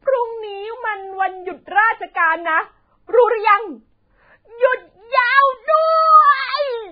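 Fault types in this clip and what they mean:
Vorbis compression: the speech sounds hissy and grainy throughout, with roughened vowels and softened consonant attacks, and nothing survives above about 4.9 kHz. This is likely heavy Vorbis coding at a very low bitrate, around 13 kbps, where the encoder lowers its cut-off and quantises the remaining treble so coarsely that detail turns into noise. A spectrogram shows a flat ceiling at 4.9 kHz, speckled patchy energy below it, and smeared onsets in the waveform.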